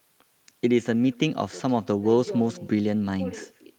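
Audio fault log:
throughout, echo with no canceller: every stretch of speech is trailed around 150 ms later by a faint, thinner copy about 28 dB down, because the far end's loudspeaker feeds its microphone and nothing strips that return before it travels back.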